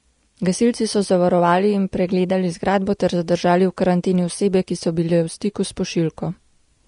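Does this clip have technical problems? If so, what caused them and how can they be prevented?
Yes. Throughout, the speech sounds hissy and grainy with nothing above 10.6 kHz, likely Vorbis compression at around 36 kbps quantising the treble so coarsely that detail becomes noise. Encoding at a higher bitrate or quality setting would prevent this.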